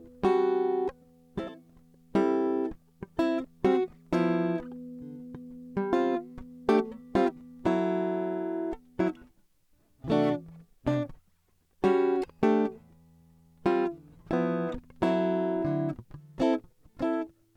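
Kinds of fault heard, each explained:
No technical faults are audible in this music recording.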